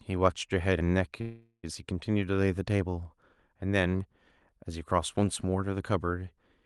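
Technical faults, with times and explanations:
1.21–1.65 s, call audio freeze: a fading buzz then silence, likely from late packets emptying the jitter buffer; audio resumes where it stopped, nothing skipped.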